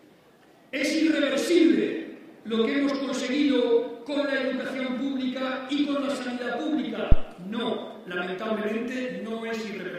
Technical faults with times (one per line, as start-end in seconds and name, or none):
7.12-7.27 phantom power thump